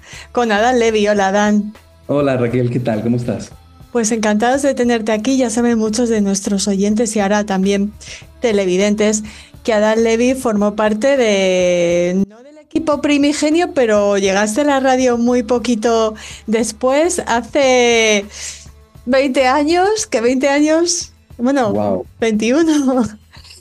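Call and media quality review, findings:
Audio dropout to a faint residue, 12.24 to 12.76 s (about 0.52 s). Sound cuts abruptly to a faint leak around 25 dB below normal level, then returns mid-flow. Likely cause: signal lost upstream while the downstream path stayed live. Waveform: sharp step down to a thin, low-amplitude band, sharp step back up. Spectrogram: hard-edged vertical band of greatly reduced energy, no fade taper at either edge.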